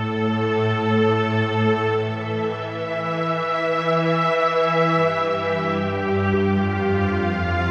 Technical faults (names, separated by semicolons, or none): none